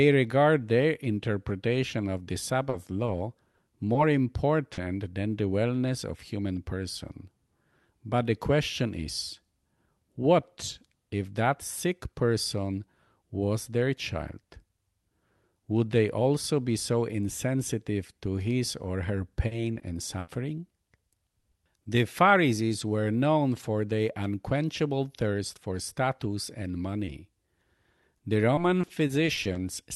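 Repeated packet loss (robotic sound) hits from 2.69 to 3.97 s: five gaps totalling 120 ms are patched by extending the last waveform, giving a choppy stutter. At 4.73 to 4.79 s, just before "than the wellness of", a short concealed packet loss fills 40 ms with extrapolated audio, heard as a brief smear. Repeated loss returns at 19.47 to 20.29 s after "to his or her" (four gaps, 160 ms, longest 80 ms), then at 21.09 to 21.87 s (four gaps, 100 ms). After "thirst for status and", a 20 ms concealed loss at 27.05 s leaves a brief smear. Finally, 28.17 to 29.57 s has nine 20 ms gaps, a rapid choppy flutter.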